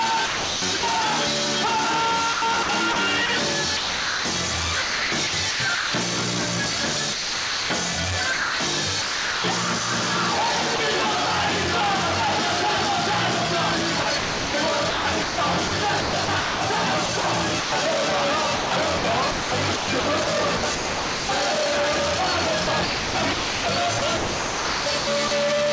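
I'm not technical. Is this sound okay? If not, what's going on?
No. Sound chopped by the voice detector: at 0.26–0.83, 2.33–5.93, 7.13–9.44, 14.03–17.72, 18.56–21.29 and 22.64–25.31 s, pieces of sound flicker out into a soft hiss and back. The likely cause is the sender's voice detector repeatedly pausing transmission and the receiver filling gaps with artificial background noise. Sound dropped by the voice detector: at 10.76–10.79 s, a brief snippet vanishes into that same hiss. The likely cause is the detector mistaking it for background and briefly stopping sending.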